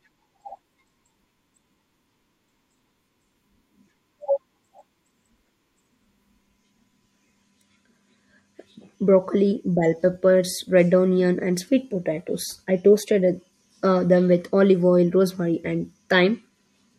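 No technical faults are audible anywhere in the speech recording.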